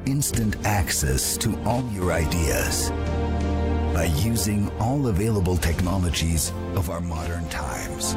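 At 1.81 to 2.02 s, and again from 6.81 to 8.03 s, the level suddenly sags by about 6 dB and then recovers. That's likely one channel dropping out: the mono sum loses half of the shared material, and anything unique to that side vanishes.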